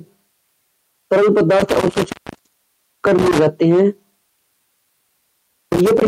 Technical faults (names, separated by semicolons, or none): intermittent contact